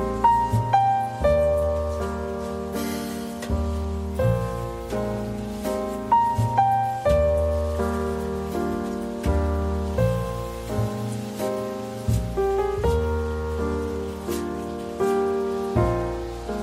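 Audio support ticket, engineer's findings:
No faults found on listening. No dropouts, clicks, level jumps or distortion events were identified at any point.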